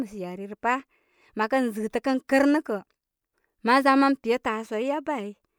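No technical faults can be heard anywhere in this speech recording.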